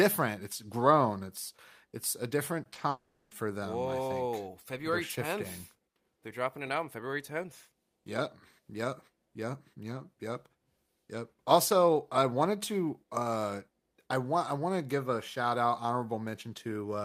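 Short concealed packet loss occurs three times in quick succession, at 2.63 to 2.67 s, 2.73 to 2.77 s and 2.79 to 2.83 s. Each time about 20 ms of speech failed to reach the decoder in time, and the receiver bridged the hole by extending the preceding sound, pitched where it was voiced and as shaped noise where it was not, before blending back. The result is a cluster of brief smears and small wobbles.

Long network dropout follows at 2.89 to 3.33 s. For about 0.42 s the original speech is gone, and in its place a synthetic continuation of the last sound stretches across the whole gap as a buzzy, hissy tail that never settles into silence. Speech then resumes with that stretch missing. The likely cause is a network stall during which no packets arrived, so the decoder had to invent audio for the entire interval.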